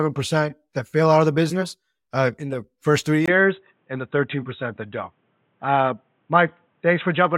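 At 3.26 s, after "in the first three", a 20 ms gap marks a likely input switched to a poorer device; the spectrogram then shows nothing above 3.9 kHz, and the speech sounds dull at unchanged level.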